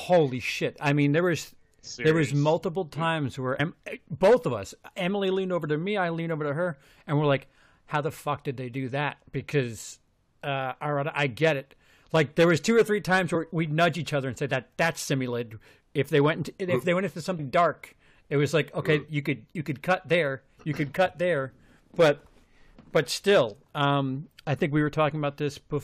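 At 3.59 s, 13.34 s and 17.38 s the speech jumps forward: compressed frames skipped, missing or rejected by the decoder. Roughly 50, 70 and 100 ms of audio vanish, which fits two, three and four 23.2 ms frames.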